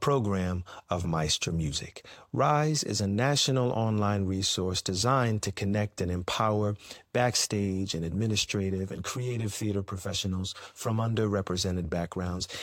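From 8.59 to 11.15 s, just after "and empower backstage and", one channel lags the other by roughly 10 ms before the two are summed to mono, causing channel delay (comb filtering). Evenly spaced notches starting near 50 Hz make the speech sound hollow and phasey.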